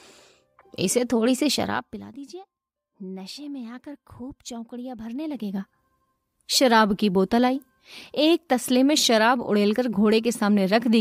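From 1.50 to 2.13 s, the level drops by about 15 dB with zipper noise. The fade moves in 1 dB steps, roughly thirty a second, with no smoothing between them. Each jump leaves a small click. Together they form a fast ticking over the sound. From 5.03 to 5.84 s, the level climbs back by about 15 dB. The same 1 dB stepping returns, slower at around twenty a second, so the ticks are more widely spaced.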